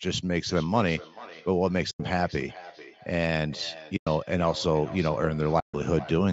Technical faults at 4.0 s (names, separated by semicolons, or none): feedback echo between two devices; AAC frame loss with muting